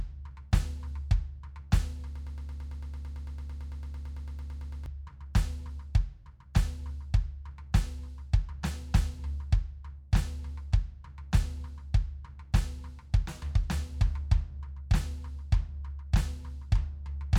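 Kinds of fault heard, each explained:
Broken-record loop: from 2.16 to 4.86 s the music stutters on a 0.11 s fragment repeated 24 times, likely a stalled player or stream.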